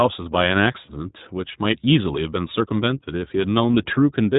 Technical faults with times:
0.00-4.39 iLBC codec
0.86-0.90 lost iLBC frames
3.73 lost iLBC frames

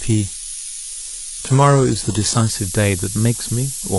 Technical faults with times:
0.00-3.98 low bit depth with noise shaping
0.00-2.50 adaptive stream starting at a low bitrate

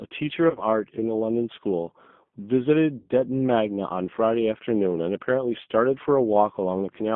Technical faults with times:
0.00-7.16 G.729 codec
0.50-0.63 VoIP packet loss concealed by the speech codec
2.98-3.08 VoIP packet loss concealed by the speech codec

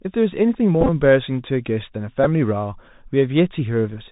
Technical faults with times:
0.00-4.12 Bluetooth CVSD headset codec
0.81-0.89 Bluetooth headset packet repeated
2.24 Bluetooth headset packet repeated

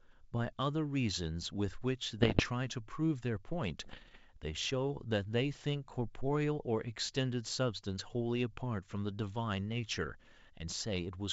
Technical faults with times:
2.19-2.46 bit errors on an ADPCM link
3.82-4.17 bit errors on an ADPCM link

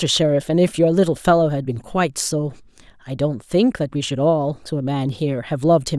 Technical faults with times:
none

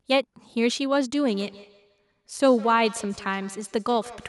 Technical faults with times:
1.28-4.29 feedback echo between two devices

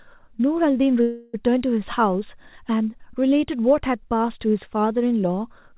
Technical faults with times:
1.02-1.35 call audio freeze

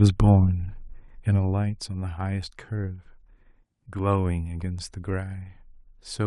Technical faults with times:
0.85-1.88 zipper noise

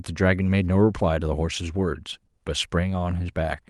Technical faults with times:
none

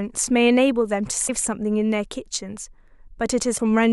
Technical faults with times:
1.27-1.30 broken MP3 bit reservoir
3.57-3.60 broken MP3 bit reservoir

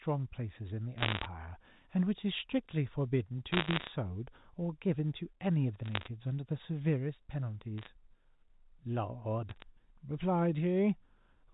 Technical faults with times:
0.98-1.26 bit errors on a digital phone line
3.52-3.88 bit errors on a digital phone line
5.86-6.08 bit errors on a digital phone line
7.78-7.87 bit errors on a digital phone line
9.50-9.62 bit errors on a digital phone line

